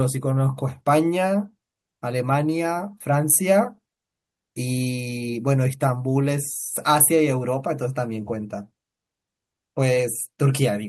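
A speech recording with no technical fault to point to. Nothing in it calls for a time, a value or a cause.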